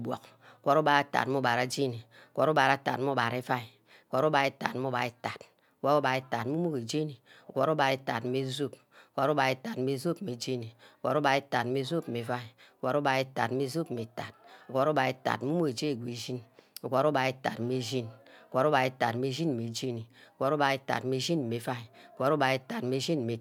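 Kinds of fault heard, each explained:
Nothing stood out as a technical problem on listening to this speech recording.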